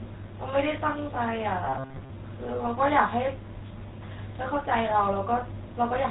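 From start to finish the speech carries the sound of the GSM full-rate codec, the original mobile-phone coder, applied at a rate that fits 13 kbps. It rebuilds the voice from a vocal-tract model excited by sparse, regularly spaced pulses, so the result has a plainly audible buzzy, gravelly roughness. On a spectrogram the energy stops abruptly at 4 kHz, and harmonics below look smeared and grainy rather than cleanly striated.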